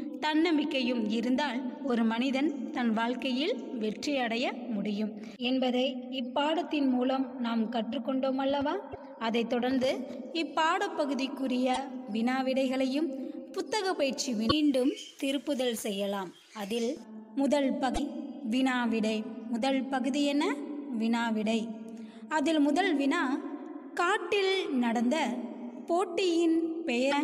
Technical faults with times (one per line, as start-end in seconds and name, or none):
8.92-8.95 damaged data in a compressed stream
11.74-11.78 damaged data in a compressed stream
14.46-14.52 damaged data in a compressed stream
17.91-17.99 damaged data in a compressed stream
27.08-27.14 damaged data in a compressed stream